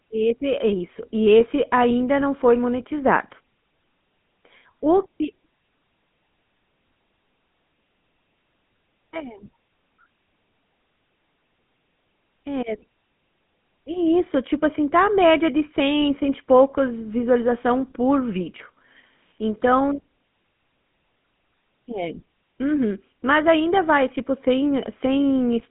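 Throughout the clip, the speech has been carried through the GSM full-rate codec, whose coarse pulse-driven rebuild of the voice points to the original 13 kbps mobile coding. The encoder models the vocal tract and replaces the real excitation with a sparse pulse train, so the voice comes out buzzy and gravelly with plainly audible damage. The line band sits between 150 Hz and 3.5 kHz, and nothing survives above 3.8 kHz, leaving the sound narrow and dull.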